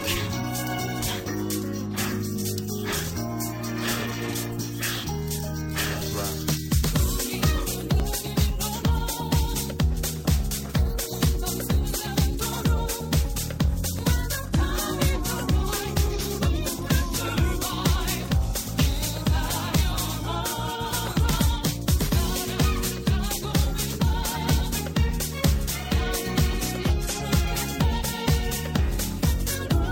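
The audio has three brief skips at 8.00 s, 13.99 s and 15.97 s. Each is an overlap between stream segments. All three fall near 2-second boundaries, which fits segments 2.0 s long. At each joint, the time stamps of two segments claim the same stretch of time. The player trims the overlap, but that sound was never actually duplicated. About 9 ms is lost at 8.00 s and about 5 ms at each later point. The waveform jumps across the gap, producing a tiny skip.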